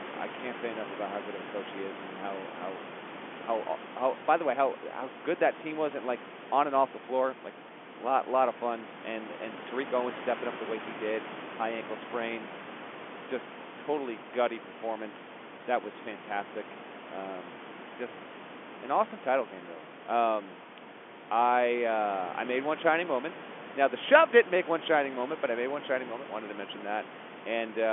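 No faults: the speech sits about 15 dB above room noise, and the band is narrowed to the G.711 telephone range of roughly 200 Hz to 3.4 kHz, with nothing above 3.7 kHz.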